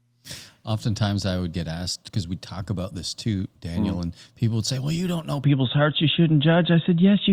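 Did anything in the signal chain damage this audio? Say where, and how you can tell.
Yes. At 5.44 s the input likely switched to a poorer device: the speech turns dull with nothing above 3.8 kHz, shifts level by a few dB, and picks up faint new background noise.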